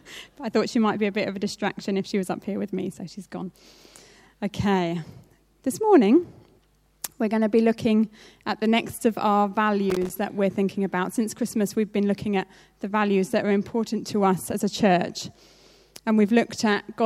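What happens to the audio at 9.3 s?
Nothing goes wrong at 9.3 s; the audio plays through that moment intact, with no dropout, glitch or other audible fault.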